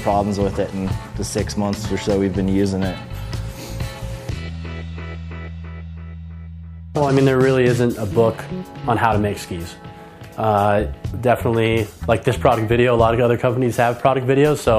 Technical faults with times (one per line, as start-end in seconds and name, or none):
none